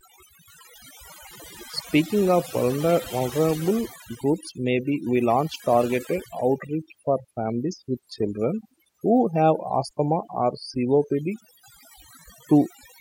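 From start to finish the speech sits over a background of near silence flecked with twinkling specks. That is overdone noise removal: the reduction was set too strong, so bands near its noise estimate were pushed far down or cut, and quiet parts of the voice vanished with them.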